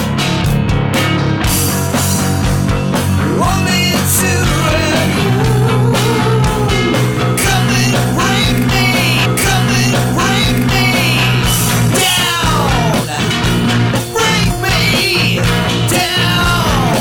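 At 9.24 s a stream segment is repeated: the player queued the same chunk twice, so about 2.0 s of audio, up to 11.24 s, plays over again after a small blip at the jump back. Unlike a stall or dropout, nothing goes silent or missing; the timeline simply runs about 2 s longer.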